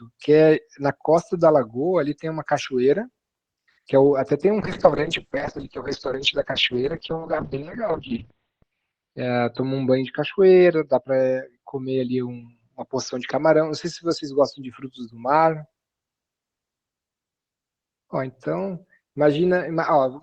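At 4.61 s the speech goes through a call bitrate drop that lasts until about 14.8 s. The encoder was pushed onto far fewer bits, consistent with a fall from around 32 kbps to roughly 9 kbps, so it codes much more coarsely and the top end gets cut from 20 kHz down to 4 kHz. You hear it turn muffled and rough, with a watery edge, worst for about 3.5 s at the bottom, before the brightness returns.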